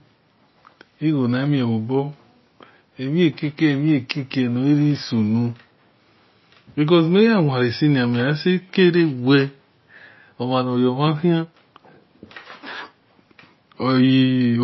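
From start to finish the speech carries plainly audible damage, likely from MP3 compression at a low bitrate, which fits roughly 24 kbps. Nothing survives above 5.8 kHz, so s sounds lose their hiss and turn dull, while weak detail flickers in and out, giving a watery, swirly texture with smeared onsets. A spectrogram shows a flat ceiling at 5.8 kHz and patchy, blinking blocks of energy beneath it.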